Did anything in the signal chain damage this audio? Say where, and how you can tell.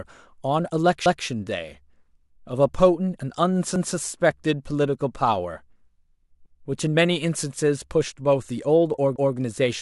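Yes. The speech was damaged at the buffer or chunking stage by overlapping chunks. A 200 ms stretch repeats as a stutter at 1.06, 3.76, 6.46 and 9.16 s. Each 2.5 s chunk starts before the previous one ends, so every join replays its tail.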